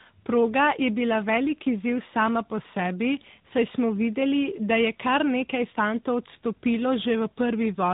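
From start to finish the speech carries the signature of tandem speech coding: it sounds like two speech codecs in a row, fitting a G.726 link at 24 kbit/s passed through G.711 and then coded again as AMR-NB at 10.2 kbit/s. Each stage re-encodes the previous stage's errors, so distortion compounds. Nothing survives above 3.8 kHz, leaving the sound muffled, and the stacked quantisation gives it a rough, gritty texture with a warbling quality.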